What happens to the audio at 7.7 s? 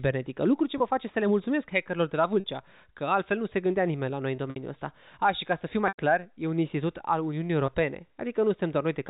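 Right around 7.66 to 7.68 s there's a packet loss with pitch repetition: about 20 ms of audio drops out, which fits a single lost packet, and the receiver fills the hole by looping the last pitch period, so you hear a brief, slightly held buzz.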